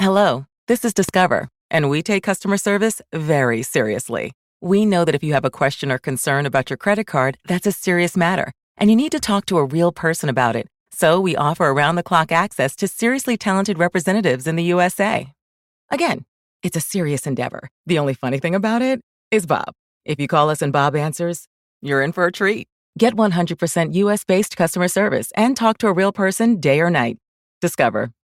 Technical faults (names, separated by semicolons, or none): loud pop